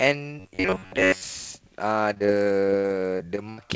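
From 0.40 to 1.23 s, audio likely arrived too seldom, so roughly 11 ms chunks were repeated over most of the stretch, giving robotic sound from repeated short buffers: a rigid 93.8 Hz buzz. From 2.14 to 3.59 s, repeated packet loss (robotic sound) leaves about ten holes, the longest 77 ms, patched by stretching the previous sound, so the audio turns choppy with pieces missing.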